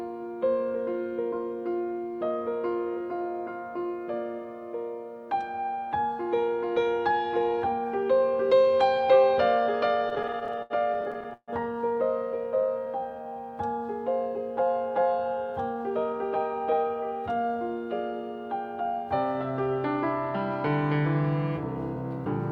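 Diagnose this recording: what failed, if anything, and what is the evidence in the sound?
Repeated stalls (stutter) at the network and jitter-buffer stage, 10.09 to 11.50 s: the sound halts 21 times, the longest hold lasting 144 ms. Late packets drained the buffer, and the receiver extended the last sound to fill 402 ms, about 29 percent of that span. Nothing is lost, but the passage drags.

Jitter buffer slow-down, 12.44 to 13.23 s: the audio plays at 89 percent speed with unchanged pitch, stretching sounds by 93 ms in total. The buffer was rebuilding its reserve by repeating single pitch periods and pause fragments many times over.

Jitter buffer speed-up, 15.19 to 16.14 s: playback runs at 109 percent speed at the same pitch and sounds hurried. With excess audio queued, the receiver trimmed short pitch-period pieces repeatedly, discarding around a tenth of a second to bring the delay down.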